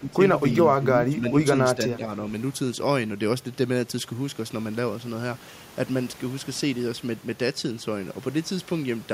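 Speech suppressed in double talk hits this speech clip at 0.00–0.21, 0.77–0.86, 1.09–1.37, 1.75–1.80 and 1.97–2.10 s. The talker sinks roughly 15 dB in the first two dips and about 5 dB later, likely an echo canceller turning everything down while both sides spoke.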